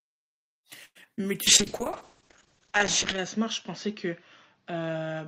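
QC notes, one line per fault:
0.85–0.97 s, short stall from a late packet: a sound is held and stretched for about 0.1 s with a faint buzzy sustain, then resumes with nothing lost. A packet arrived late and the jitter buffer ran dry, so the receiver extended the last sound until it came, delaying everything after by about 0.1 s.
1.01–1.04 s and 1.16–1.29 s, short concealed packet loss: two brief smears or wobbles where about 20 ms of real audio is missing each time and a short sound can drop out. The decoder never got those packets and filled each gap by continuing the previous sound before blending back. The second repair is a little longer.
1.48–5.27 s, call bitrate drop: from 1.48 s to the end the sound turns rough and watery and loses its top end, with nothing above 8 kHz instead of the full range up to 20 kHz. This fits a fall from around 32 kbps to around 7 kbps, held at the lowest rate for about 1.7 s. 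A lower bandwidth estimate forced the encoder to code more coarsely and cut the high frequencies.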